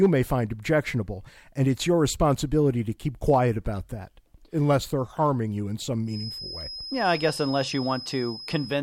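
From 6.04 s, just after "harming you in some", a feedback whistle sits behind the speech and continues to the end of the clip. It is a thin, steady tone at about 5.1 kHz, roughly 15 dB below the speech, swelling and fading slowly in level. The likely cause is a loudspeaker-to-microphone loop running with gain just at the threshold of feedback, so one high frequency keeps ringing on its own without building into a full howl.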